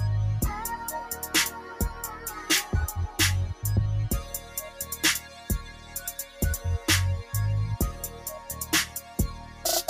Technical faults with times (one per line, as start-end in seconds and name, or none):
0.00-9.90 noise suppressor applied to music or sounds
1.94-2.25 sound cut by the noise suppressor
4.40-5.95 sound cut by the noise suppressor
8.15-8.49 sound cut by the noise suppressor
8.94-9.65 sound cut by the noise suppressor